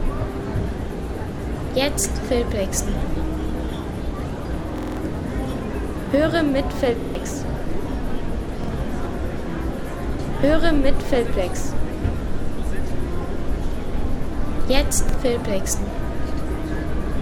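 Repeated buffer stutters at 4.78–4.97 s, 7.01–7.15 s, 8.64–8.68 s and 15.09–15.14 s: the same 46 ms chunk replays with hard joins, which fits a 2048-sample buffer arriving late.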